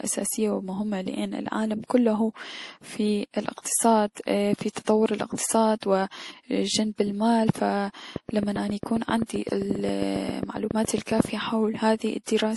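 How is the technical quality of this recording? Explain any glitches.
The recording's technical quality is compromised by two faults, one persistent and one brief.

Transcoding between lossy codecs runs throughout. The speech likely passed through MP3 and then Opus, both at 48 kbit/s. This stacks the artefacts of both codecs and leaves nothing above 12 kHz.

A train of clicks runs from 8.16 to 11.26 s. About twenty evenly spaced pops arrive at 7.45 per second, roughly 10 dB above the speech. They were likely caused by interference from nearby equipment or a faulty connection or power supply.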